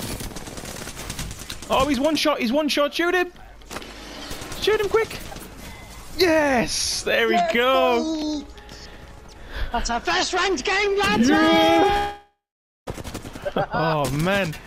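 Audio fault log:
8.22 s, block of digital silence: the output drops to silence for 0.73 ms, which fits a gap of about 32 samples, and returns with no fade. It is far too short to hear as a hole, so it comes across as a single sharp tick. Unlike a dropout, nothing is smeared or lost beyond that instant.
11.97 to 12.89 s, long network dropout: about 0.9 s of audio never arrives, likely a network loss. The last sound is stretched into a fading buzz, then about 0.5 s of near silence follows, and playback resumes further along. The fading tail and skipped material set it apart from a clean cut to zeros.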